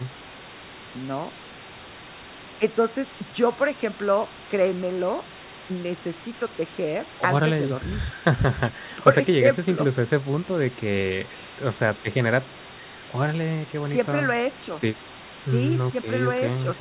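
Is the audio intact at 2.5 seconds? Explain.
Yes, the audio is intact at 2.5 seconds, with no dropout, click, distortion or other fault at that moment.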